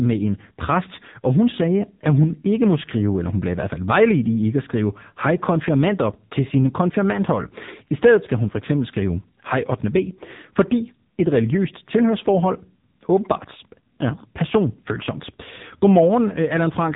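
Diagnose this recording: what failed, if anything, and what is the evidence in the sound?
The failure is at the codec stage: the speech has been through the AMR narrowband mobile codec (AMR-NB) at a low rate, and the heavy damage points to one of its lower modes, around 6.7 kbps. Throughout the clip, nothing above about 3.8 kHz survives, which fits the codec's 8 kHz sampling. So few bits are left for the pulses driving its vocal-tract model in each 5 ms subframe that the speech comes out buzzy and synthetic.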